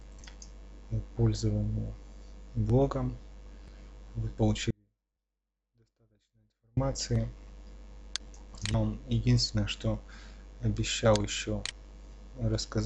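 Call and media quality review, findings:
Audio dropout to a faint residue, 4.71 to 6.77 s. Signal cuts abruptly for about 2.1 s. Gap holds only faint sound, about 40 dB down. Likely upstream signal loss with downstream path still live. Abrupt, not a fade.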